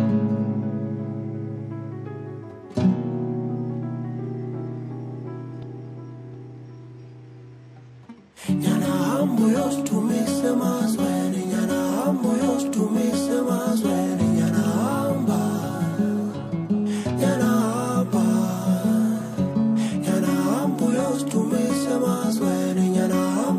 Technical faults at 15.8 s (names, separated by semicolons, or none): none